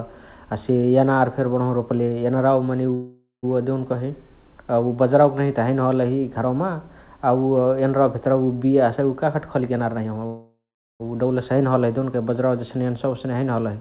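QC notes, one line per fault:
2.94–3.45 s, call audio freeze: the sound stalls and the last fragment is stretched into a fading buzz for about 0.49 s, the final 0.16 s of it silent, then it resumes where it stopped with nothing lost. This likely comes from delayed packets draining the jitter buffer. Spectrogram shows smeared harmonic bands decaying into a blank strip.
9.17–10.20 s, jitter buffer speed-up: the sound hurries along at roughly 125% speed with pitch unchanged, as around 0.3 s of material is trimmed out in many small pitch-period cuts to shrink an overfilled buffer. Waveform shows compressed syllable spacing, spectrogram shows steady pitch harmonics.
10.26–11.02 s, call audio freeze: a longer stall, the held sound fading out over about 0.74 s with the last 0.42 s silent, then continuing intact and later than before, likely because packets were late again. Waveform shows a decaying tail and a flat gap, and the spectrogram a fading smear then blank space, all under the 4 kHz ceiling of the G.711 narrowband path.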